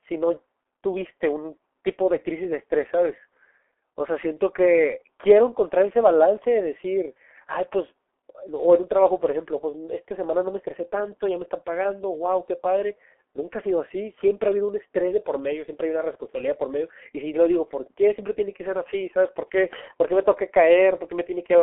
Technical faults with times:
0.00-21.63 G.723.1 codec

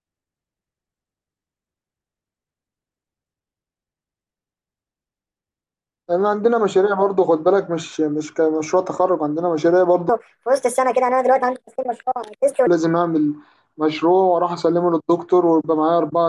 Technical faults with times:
10.09-12.67 wrong sample rate

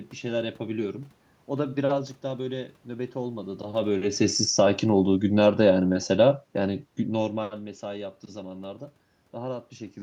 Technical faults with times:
3.78-7.49 automatic gain falling

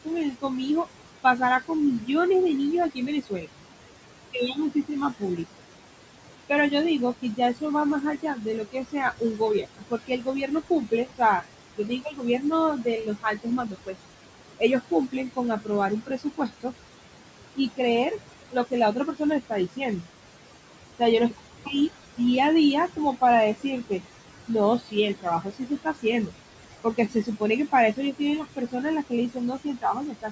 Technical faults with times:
0.00-30.32 noise suppressor artifacts
0.05-20.06 speech cut by the noise suppressor
20.99-30.32 speech cut by the noise suppressor

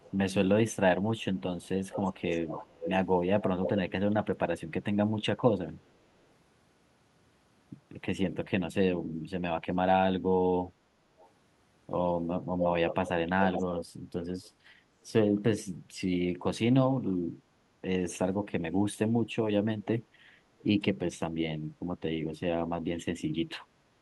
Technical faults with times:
0.00-3.81 echo leak
10.66-11.30 echo leak
12.59-13.85 echo leak
14.43-14.50 echo leak
17.40-17.82 background gated by the echo canceller
20.59-20.63 echo leak

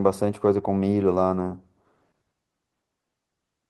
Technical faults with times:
none

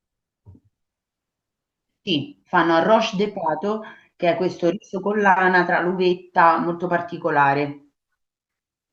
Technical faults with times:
none

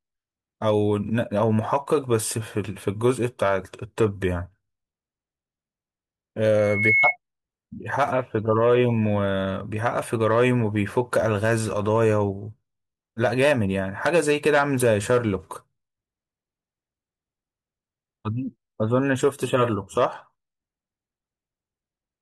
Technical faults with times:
6.58-7.16 loudspeaker feedback squeal

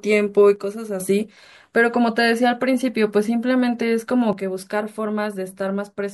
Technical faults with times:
0.56-1.00 one channel drops out
4.33-6.13 one channel drops out

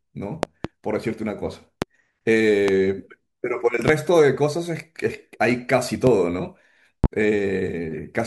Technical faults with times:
0.43-0.68 loud pop
1.82-1.86 loud pop
2.68-2.72 loud pop
3.88-3.91 loud pop
6.07-6.11 loud pop
7.04-7.08 loud pop

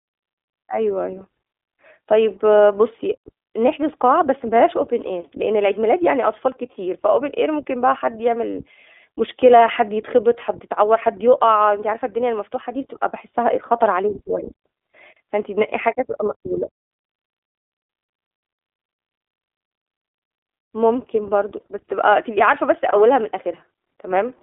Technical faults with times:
0.00-24.42 iLBC codec

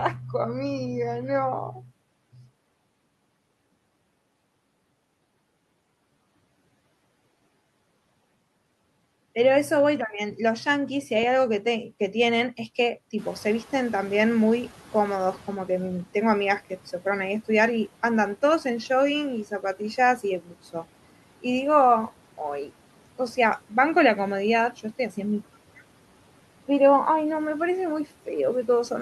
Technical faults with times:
13.18-15.60 noise suppressor catching up

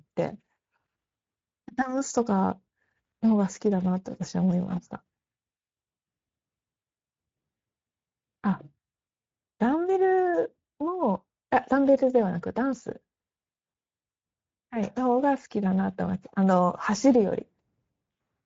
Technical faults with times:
0.00-18.46 Speex codec

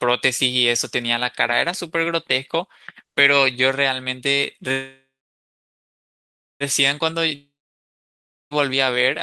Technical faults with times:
4.71-6.63 call audio freeze
7.35-8.62 long network dropout

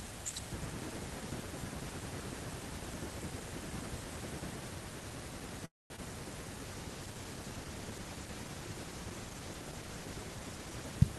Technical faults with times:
5.65-5.92 call audio freeze
5.96-6.00 short concealed packet loss
6.64-11.03 call bitrate drop

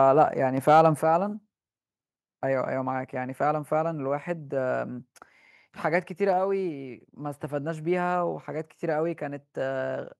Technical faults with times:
0.68-0.86 microphone overload
1.02 microphone volume stepped down

